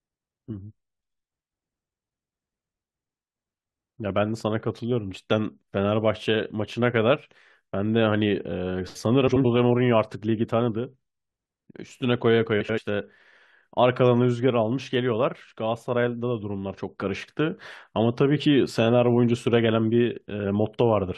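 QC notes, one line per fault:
9.27–9.45 s and 12.60–12.79 s, frames out of order: in each stretch two neighbouring blocks of about 85 ms were decoded in swapped order, so the later half plays before the earlier one. This gives a brief garbled flutter, which fits runs of about four frames. Unlike a dropout or a stutter, nothing goes silent or repeats and no time is lost. The audio is only reshuffled.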